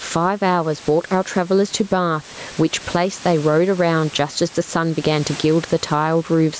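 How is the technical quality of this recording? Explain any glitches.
The recording has one clear fault, gain pumping, present throughout. The room noise sits about 29 dB below the speech, and the band stops near 8 kHz from the call's microphone processing. The gain swings by around 10 dB, pulled down under each loud syllable. That is likely an overdriven input gain with a fast limiter clamping every peak. Unlike a noise gate, the level is squashed rather than cut out.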